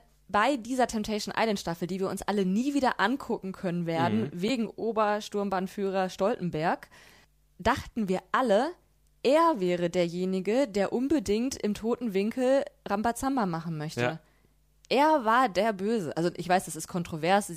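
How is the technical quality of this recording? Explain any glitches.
One glitch is audible in the speech. Damaged data in a compressed stream, from 4.46 to 4.51 s: corrupted bytes make the decoder misread frames and lose sync, giving a brief glitch heard as a chirp, squawk, click or short hole.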